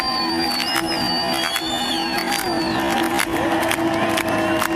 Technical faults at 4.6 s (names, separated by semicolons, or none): none